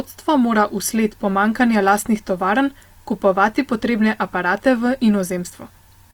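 From start to finish the speech carries plainly audible Opus compression damage. The sound points to the codec's music (CELT) mode, likely at a low bitrate near 24 kbps. Each band keeps its energy, but bands short of bits are refilled by folding lower bands or with noise, so voiced sounds come out rough and grainy rather than swirly. A spectrogram shows energy reaching about 20.1 kHz, with few holes but a speckled, noisy texture in the upper bands.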